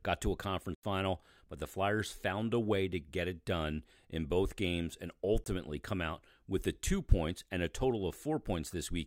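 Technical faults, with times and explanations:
0.75–0.83 s and 5.44–5.46 s, block of digital silence: the playback path likely failed to hand over audio in time, and whole blocks went out as zeros, about 85 ms just after "got to a" and about 21 ms between "in both games and" and "come out with the", lengths that fit 4096- and 1024-sample buffers. The signal drops straight to nothing and returns with no fade. The first is heard as a short hole, the second as a pop.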